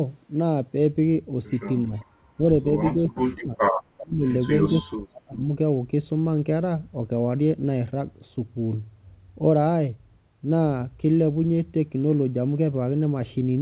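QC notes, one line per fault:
1.87–1.93 s, 2.97–3.6 s, 4.01–4.27 s and 4.84–5.49 s: speech suppressed in double talk. The level dips in each window. The first dip is brief and shallow, about 10 dB. The later ones run longer and cut deeper, up to about 40 dB. In the last window the sound nearly drops out. The likely cause is an echo canceller that could not separate its own talker from loudspeaker echo while both sides spoke, so it pulled everything down.
1.95–2.05 s and 3.97–4.05 s: echo leak. A delayed copy of the sound comes back as a short scrap. It lags by 396 ms at the first spot and 398 ms at the second. The first copy is very faint, about 30 dB under the speech. The second is louder, about 15 dB under, and easier to catch. These scraps likely come from a loudspeaker on one side whose echo canceller let part of its microphone pickup through and sent it back.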